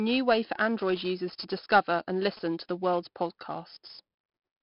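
Across the whole speech clip runs 4-bit ADPCM compression, and the damage is heavy. Each sample is coded as a coarse 4-bit step from a predicted value, so the error becomes gritty hiss that rises and falls with the speech itself. Unlike steady tape or preamp hiss, it disappears in pauses and swells on loud syllables, with roughness on sharp attacks. Nothing remains above 5.3 kHz, dulling the sound, which fits a rate near 44 kbps.

From 0.81 s to 2.95 s, starting just after "way for", GSM signalling bursts intrude at about 20 dB below the speech. A nearby 2G phone exchanging short bursts with the network has its radio energy rectified by the audio circuitry, producing brief 217 Hz buzzes in a galloping dit-dit-dit rhythm. Mains hum would be a steady, continuous tone. This buzz comes in stuttering groups and stops once the signalling ends.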